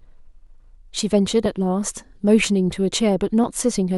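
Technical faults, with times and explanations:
0.47 s, 1.46 s and 3.44 s: overlap between stream segments. At each point the speech jumps forward, as if roughly 15 ms of sound was cut away. The times sit on a one-second grid, which fits segments whose time stamps overlap slightly, so the player discards material that was never duplicated. Unlike a dropout, there is no silent gap or muting. The sound is shortened and joined abruptly.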